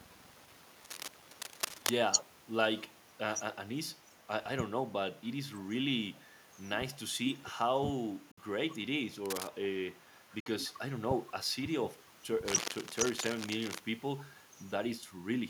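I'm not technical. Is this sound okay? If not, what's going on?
No. From 0.8 to 1.9 s, 9.25 to 9.48 s, and 12.48 to 13.8 s, scratchy rustling sits over the speech. It's cable scratch noise, likely from a worn, wiggled plug. At 8.31 s and 10.40 s the sound cuts out for about 58 milliseconds, then resumes. These are Bluetooth dropouts, likely sound that didn't reach the headphones in time.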